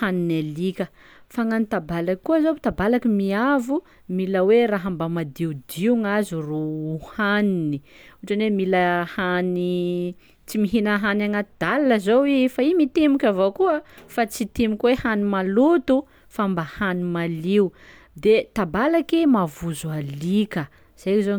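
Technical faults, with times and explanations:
Nothing here to flag: the speech comes across without any technical faults worth noting.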